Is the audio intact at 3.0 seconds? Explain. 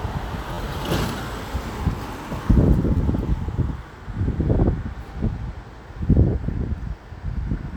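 No. From 2.97 to 3.00 s there is a repeated buffer: fresh audio arrived late, so the same piece of about 11.6 ms was played twice more, which fits a 512-sample buffer. Because the repeats are so short, they come across as a brief buzz or click. None of the sound appears lost. On a waveform, the identical short segment repeats with abrupt joins. A spectrogram shows thin vertical lines at each join and harmonic banding near 86 Hz.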